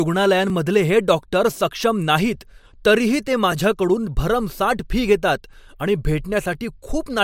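A brief click or stutter recurs at 0.50, 1.51, 2.51, 3.52, 4.53, 5.54 and 6.54 s. These are overlapping chunks. The speech was handled in 1 s blocks, each starting 7 ms before the previous one ended, so that sliver plays twice at every join.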